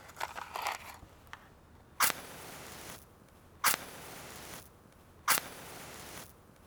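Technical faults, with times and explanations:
No technical faults are audible in this recording.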